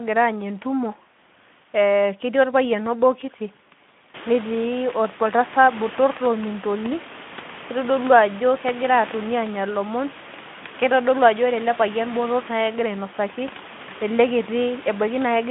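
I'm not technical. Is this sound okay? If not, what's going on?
Yes, nothing is wrong here; the background room sound that gets louder from about 4 seconds is just the room itself, and the narrow, phone-like tone comes from the Speex voice-chat compression working as it should.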